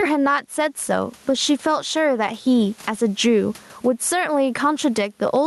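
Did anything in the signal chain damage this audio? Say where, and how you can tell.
Yes. Gain pumping runs throughout: the gain swings about 15 dB, pulled down under loud speech, giving a flat waveform envelope. The likely cause is input gain set far too high, pulled down by a fast limiter in call processing.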